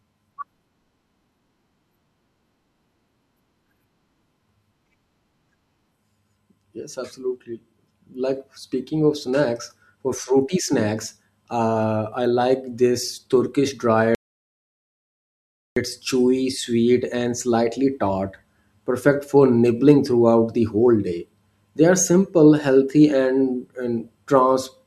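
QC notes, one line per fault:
14.15–15.76 s, audio dropout to silence: the speech cuts off mid-flow into dead digital silence with no room tone, then resumes at "chewy sweet and slightly". About 1.62 s of content is gone, likely because the input was lost while the recorder kept writing silence.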